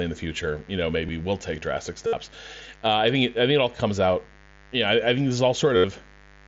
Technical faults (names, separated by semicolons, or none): mains buzz; concealed Bluetooth headset packet loss